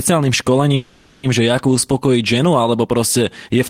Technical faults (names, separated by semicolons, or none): call audio freeze